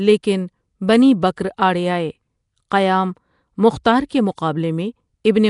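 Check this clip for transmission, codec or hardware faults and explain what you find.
One codec fault runs through the whole speech clip. It sounds like Nellymoser compression, likely from Flash's Asao codec, at a rate fitting about 44 kbps. Weak bands become noise, giving plainly audible rough hiss and smearing. Nothing remains above 10.6 kHz.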